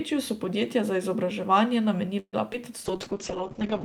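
Right after "so podjetja za izobraževanje", from 2.19 to 2.36 s, the speech stalls in what sounds like a call audio freeze, likely from packets held up in transit until the jitter buffer ran dry. The receiver stretches the last sound into a fading buzz or hiss that sinks into roughly 50 ms of silence, about 134 ms filled in all, before the speech picks up where it left off. Unlike packet loss, nothing is skipped. The speech is simply pushed later.

A short concealed packet loss follows at 2.53 to 2.56 s. Here about 40 ms of audio never arrived and is gone for good. The decoder patches only a tiny stretch before blending back, so it sounds like a brief smear rather than a stall. The stream also lands around 40 ms earlier than before, taking back part of the delay the freeze added. That missing content is what separates it from the freeze.

From 2.87 s to the end the call bitrate drops from 64 to 7 kbps and stays there for the remaining second or so. 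The encoder codes far more coarsely and narrows the bandwidth from 20 kHz to 8 kHz, so the speech turns muffled and watery. It does not recover within the clip. That sustained change in tone, rather than a momentary glitch, marks it apart from the two faults before it.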